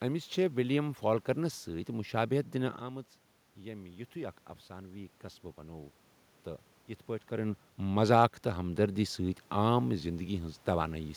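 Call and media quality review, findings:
Automatic gain rising, 2.79 to 6.02 s. Sound level falls about 12 dB near 2.5 s as the talker moves back. AGC then ramps gain up about 5 dB over 3.2 s. Voice and room noise swell together. Waveform: envelope climbs slowly. Spectrogram: noise floor brightens in step with the voice bands. Second talker movement near 7.5 s.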